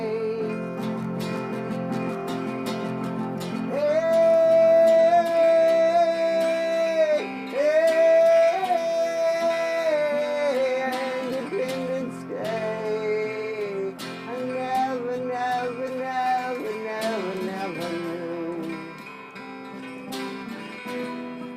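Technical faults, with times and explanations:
No technical faults detected.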